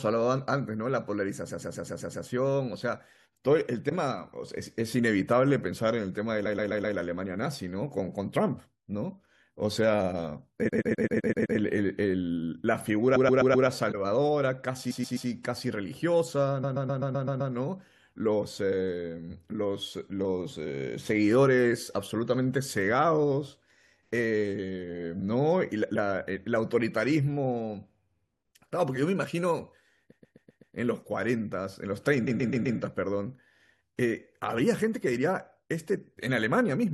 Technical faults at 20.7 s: none

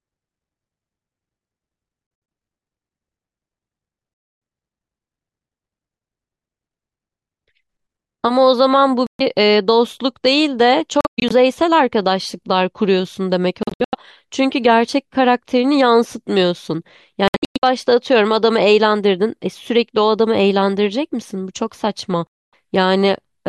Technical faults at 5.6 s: none

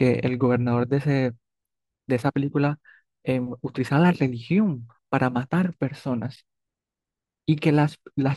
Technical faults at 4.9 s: none

